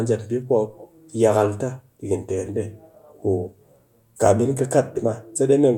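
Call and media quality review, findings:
No audible faults found in this speech recording.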